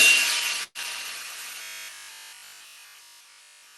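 At 0.63 s there's a burst of packet loss lasting until about 0.78 s. A run of audio never arrived in time, so the receiver kept extending the last bit of sound for roughly 114 ms, fading it down. There's a short silence of about 30 ms before the sound picks up again, with around 120 ms of the original simply gone. You hear a smeared tail, a brief dropout, then a jump.

From 1.63 s almost to the end, around 3.77 s, the sound turns robotic, most likely from repeated short buffers. Fresh audio seems to arrive too rarely, so the playback fills in by looping the last snippet over and over, for most of that stretch. The loop imposes a steady 50 Hz buzz, which fits a 20 ms buffer. The whole passage gets a hard, metallic drone, with the underlying sound only loosely tracking through, all heard through the Opus call path's roughly 12 kHz bandwidth.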